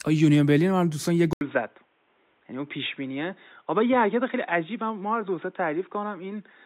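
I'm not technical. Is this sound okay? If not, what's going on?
No, not quite. At about 1.33 s the sound drops out for a split second, under a tenth of a second, and from then to the end it's duller, boxier and a bit quieter, with faint new background noise underneath. Nothing above 3.8 kHz gets through after that point. That's what you hear when the input has switched to a poorer device, most likely another microphone or a headset's call mode taking over mid-recording.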